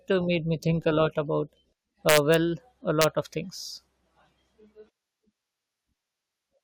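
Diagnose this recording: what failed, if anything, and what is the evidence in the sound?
A fixed-point gain or sample-format conversion stage let loud speech peaks run past full scale without saturating, so they wrapped to the opposite sign. This integer overflow produces violent cracks far harsher than clipping, from 2.09 to 2.34 s just after "think a lot about", and again from 3.02 to 3.04 s just before "of things". The peaks exceed the limit by only about 2 dB and about 1 dB, yet each overshooting sample jumps across the whole range.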